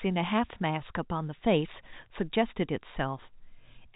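No technical faults occur in this speech clip; it carries G.711 telephone coding, which leaves nothing above 3.8 kHz and at most faint codec damage.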